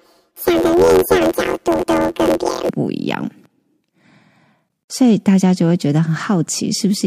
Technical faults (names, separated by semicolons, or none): planar audio read as interleaved